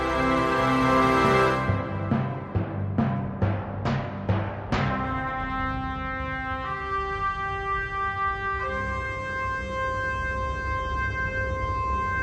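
No technical faults are audible.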